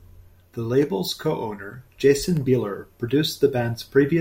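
Nothing stood out as a technical fault on listening to this speech recording.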